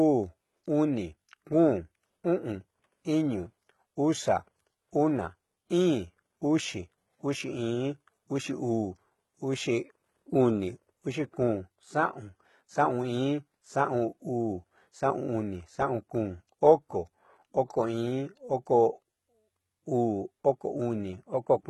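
Throughout, the speech has gritty, metallic s sounds and nothing above 11.8 kHz, likely from heavy HE-AAC compression. A spectrogram shows copied-looking treble bands stopping at a hard ceiling.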